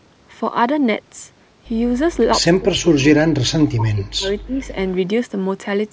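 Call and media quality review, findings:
Speech suppressed in double talk, 2.57–4.64 s: near-end speech pumps down by as much as about 40 dB, fading and breaking up for roughly two seconds. Likely cause: echo canceller treating overlapping far-end talk as echo and attenuating both. Unlike packet loss, it shows as level ducking, not clicks or concealment artefacts. Upper band stopping at 8 kHz is the normal call mic processing.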